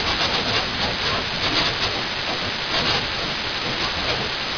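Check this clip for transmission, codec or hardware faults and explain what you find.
One fault is present: aliasing, running through the whole speech clip. The audio was resampled without an anti-aliasing filter, apparently down to an 11 kHz rate. Content above the 5.5 kHz fold point reflects back downward at roughly the level of the wanted signal, so sibilants sound gritty and metallic and the spectrum stays dense right up to the band edge.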